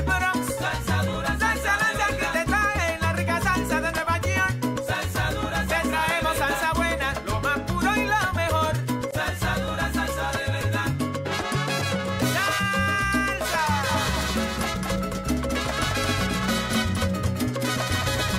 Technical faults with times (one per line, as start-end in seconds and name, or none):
13.89-18.38 doubled audio track